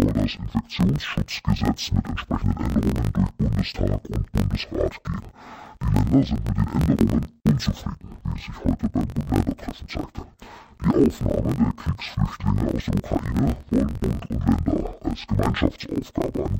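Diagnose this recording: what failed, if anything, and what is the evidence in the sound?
Interleaved audio read as planar, at the sample-format conversion stage, throughout the speech. Each 21.77 ms block has its halves played together at half speed, so pitch drops an octave. The spectrogram shows compressed harmonics and vertical striping at 45.9 Hz, heard as buzz. The waveform shows repeating block seams.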